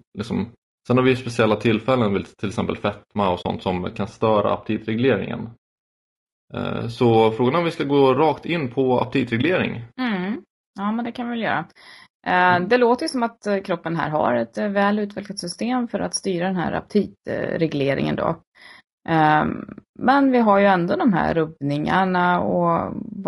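A rough, grainy texture runs through the whole speech clip, with a hiss-like fill between the harmonics and a thin, somewhat synthetic top end. That is likely low-delay AAC compression of the AAC-ELD kind used for video calls. At such a low bitrate bits run short and quantisation noise spreads between the harmonics. The plainly audible damage fits a bitrate of around 32 kbps.

From 3.41 to 3.46 s, right after "till exempel fetma och", the sound sinks into a brief, soft-edged gap and comes back. This is AAC frame loss with muting. The decoder zeroed the spectrum of the missing audio, and the overlapping windows faded the sound out and back in. The roughly 40 ms hole fits two lost frames.

Between 3.98 and 6.13 s the sound turns dull and muffled, as if covered by a cloth. The treble falls away smoothly, ending about 14 dB down at 10 kHz relative to 1 kHz. That is de-emphasis applied wrongly: a treble cut meant to undo pre-emphasis was applied to audio that had none, or was applied twice, so nothing offsets the loss of highs.

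At 9.41 to 9.44 s, just after "gå rakt in på", a shorter muted dropout of about 20 ms appears. It is the same AAC frame loss with muting, this time consistent with a single lost frame. It fades out and in just as gently as the first.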